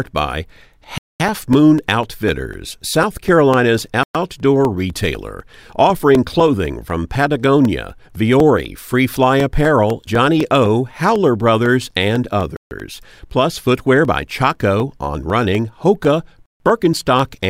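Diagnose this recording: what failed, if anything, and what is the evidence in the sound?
Periodic USB or driver dropouts, at the driver or buffer stage. A tick recurs every 0.25 s from 0.06 s to 17.45 s, around seventy in all. Each one is a gap of about 2 ms of silence cut into the speech. The ticks are audible only while someone is talking. A background task is stalling the USB bus or the audio driver on a fixed schedule. Each stall drops a small block of samples, and the output has a hole there.

A Bluetooth stall, at the playback stage, is the likely cause of four longer breaks. The sound goes fully silent from 0.98 to 1.20 s (221 ms), 4.03 to 4.15 s (115 ms), 12.57 to 12.71 s (145 ms), and 16.46 to 16.60 s (143 ms). After each one the speech resumes. Radio interference delays packets, the headphone buffer empties, and playback waits until the resent audio arrives.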